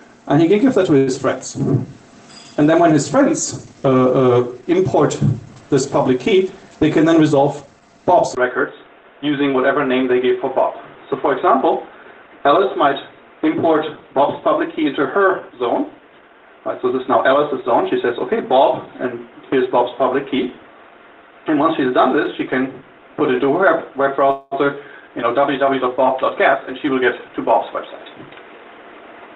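At 0.97 s there is a short stall from a late packet. A packet arrived late and the jitter buffer ran dry. The receiver held the last sound for about 96 ms, until 1.10 s. Then it picked up where it left off. Nothing is lost. One sound just lasts too long, with a faint buzzy quality. Everything after this point runs about 96 ms later than before.

From 7.08 to 7.99 s comes a jitter buffer speed-up. The buffer had built up extra audio and the receiver trimmed it back. It cut many tiny pieces, each a pitch period or so long. About a tenth of a second goes in total. The sound plays at 110% speed but keeps its pitch. It feels briefly rushed.

At 8.35 s the sound changes character for the rest of the clip. There is a 20 ms silence at the change. After it, everything above 3.8 kHz is gone, where the call path had carried content up to 8 kHz. A new background noise sits about 30 dB below the signal. 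Loudness stays roughly the same. The sound turns dull and boxy. The likely cause is the input switched to a poorer device, a narrower-band microphone or headset profile.

From 24.31 to 24.54 s there is a call audio freeze, likely from packets held up in transit. The last sound is carried on for about 204 ms as a fading, buzzy fill. It never drops to silence. Then the audio resumes from the same point, so nothing is missing. It does fall another 204 ms behind.

From 26.41 to 28.43 s comes a second jitter buffer speed-up. It runs at 109% speed, and around 0.2 s of audio is trimmed away in small pitch-length cuts. The pitch holds steady, but the pace sounds hurried for about two seconds.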